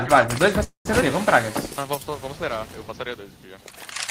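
At 0.63 s the sound stalls. The last bit carries on as a fading buzz and then goes quiet, with roughly 110 ms of near-silence, until things pick up again at 0.88 s exactly where they left off. That's a call audio freeze. The likely cause is packets held up in transit, which let the jitter buffer run dry. About 219 ms got pushed into the stream, but nothing seems to be lost.

Right after, around 1.01 to 1.04 s, there's a skip ahead. Playback jumps forward with basically no gap, and the two sides butt almost straight together. Something like 70 ms of audio just isn't there. That's a chunk dropped, in transit or by the buffer, while later audio was already queued, which also claws back some of the delay the freeze added.

From 1.52 to 2.12 s you get a jitter buffer slow-down. The pitch stays put, but everything drags to about 88% speed, with sounds stretched out. The receiver was building a cushion by repeating single pitch periods or bits of pauses over and over, adding 79 ms in total across that stretch.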